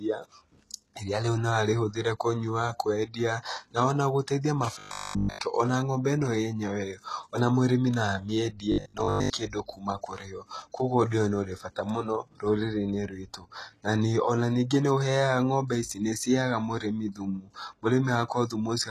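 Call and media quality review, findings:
Throughout, likely HE-AAC compression: treble above the core band is rebuilt by spectral band replication, not coded. Plainly audible codec damage: s sounds gritty and lispy, upper harmonics misaligned with lower ones. Fits a low bitrate, around 16 kbps.

4.79–5.43 s, robotic sound from repeated short buffers, likely starved playout buffer: fresh audio arrives too seldom, so the last fragment is replayed while real audio is skipped. Entirely repeats. Rigid metallic buzz at 50 Hz, matching 20 ms loops.

8.72–9.32 s, same robotic sound from repeated short buffers, likely same mechanism: a 20 ms fragment looped in place of missing audio. Most of the span repeated, so the 50 Hz buzz is broken up by real signal.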